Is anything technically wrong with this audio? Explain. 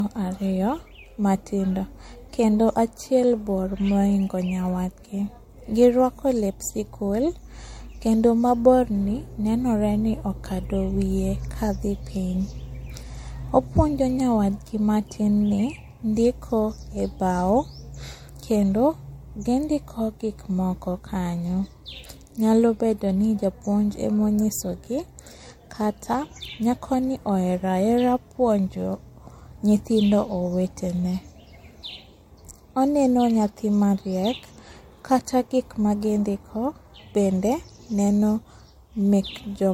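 Yes. Generation loss runs throughout the speech: it was likely encoded as MP3 about three times, at what sounds like 64 kbit/s, with each pass requantising on a shifted frame grid. Swirly, hollow smearing builds up, consonant attacks blur, and nothing remains above 16.6 kHz.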